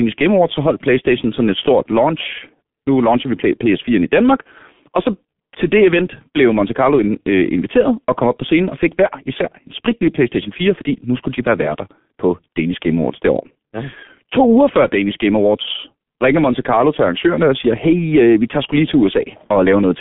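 From the first second to the last, the speech has the sound of a G.723.1 codec. Everything sits in a narrow telephone band of roughly 150 Hz to 3.5 kHz, with nothing above 3.7 kHz, so it's thoroughly muffled. The damage is heavy. The coder's voice model lags behind the talker, which leaves a hoarse, grainy texture and smears the consonants together, which fits a bitrate of around 6 kbit/s.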